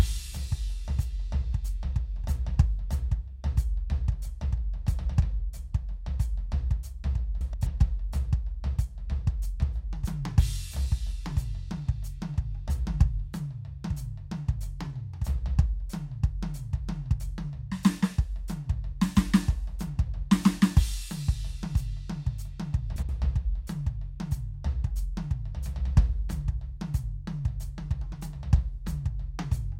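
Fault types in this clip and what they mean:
frames out of order: brief garbled flutters near 7.41 s and 22.96 s, as neighbouring 128 ms, then 64 ms, runs of frames play swapped.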